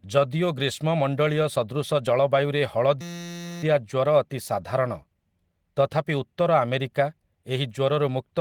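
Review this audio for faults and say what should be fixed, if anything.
From 3.01 to 3.63 s the speech gives way to a steady buzz at about 172 Hz, a single 5.8 ms scrap of audio repeating roughly a hundred times. This is a system hang loop: the host or driver stalled while the audio hardware kept replaying the same ring buffer, and a loop that short, which fits a 256-sample buffer, fuses into a tone. Little or no audio is lost, since the speech resumes where it stopped. To prevent it, add a watchdog that mutes or zeroes the output buffer whenever the audio thread stops refilling it.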